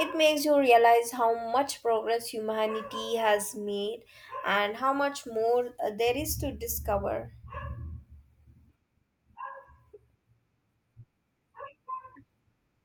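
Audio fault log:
6.28 s, bit error spike: a single sharp tick just before "to discover", reaching about -32 dBFS across two samples. A flipped bit makes the sample value jump by a power of two and snap straight back. The tick is broadband and unrelated to the speech.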